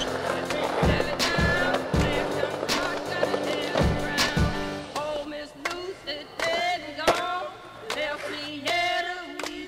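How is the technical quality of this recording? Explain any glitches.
The recording has one flaw that runs through the whole clip: sample clock jitter. The converter's timing wanders by something under a microsecond. Each sample is taken a little early or late. Where the waveform changes fast, that timing error becomes an amplitude error. The result is a fine hiss or grain, roughly 45 dB below the signal. It tracks the sound. It grows on loud, bright passages and drops away when the audio goes quiet.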